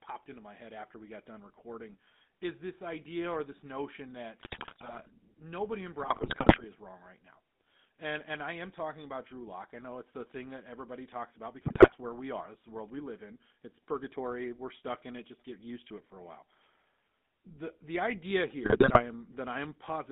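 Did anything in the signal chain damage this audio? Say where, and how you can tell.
Yes. At the codec stage, GSM full-rate coding runs through the whole clip: the speech sits in a band of roughly 200 Hz to 3.7 kHz with that gravelly, buzzy edge. The excitation is rebuilt from sparse regular pulses, so the texture roughens, which fits a 13 kbps GSM stream.

On the network side, GSM bit errors break in at 4.40–5.16 s, 6.02–6.65 s, 11.66–11.95 s and 18.64–19.02 s as squawks, pops and gargling. Corrupted filter, pitch or gain values warp the spectrum and kick the level around frame by frame, which points to a bit error rate of roughly 3 to 4.5 percent on a weak link.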